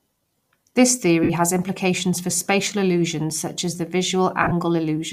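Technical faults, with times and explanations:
1.23–1.30 s and 4.42–4.52 s, lost LE Audio frames: the speech briefly turns into a noisy smear, for 60 ms before "has implications for spatial", then in broken patches over 90 ms after "illusions such as the". The decoder fills each gap by replaying the last spectrum with random signs.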